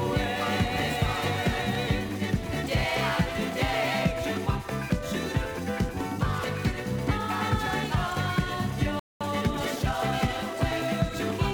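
A playback stall at 8.99 s silences the audio for about 213 ms until 9.21 s, most likely because the player ran short of buffered data or its output thread was briefly blocked, so the sound halts mid-flow before resuming. A time-compressed catch-up follows from 9.21 s to 11.33 s, running about 1.1 times faster as the player trims its backlog by removing short segments and cross-fading the joins, which keeps the pitch normal but makes the sound hurried.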